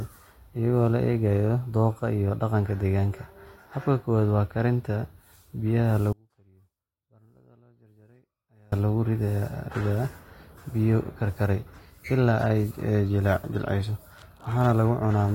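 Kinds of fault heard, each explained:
Audio dropout to a faint residue: The speech cuts out abruptly at 6.13 s and returns just as suddenly at 8.72 s, a gap of about 2.6 s. This is not a pause or a fade. The gap is not silent. A faint trace of the sound remains, roughly 30 dB below its normal level. The likely cause is that the wanted signal was lost while the path after the break stayed live, leaking only this weak residue.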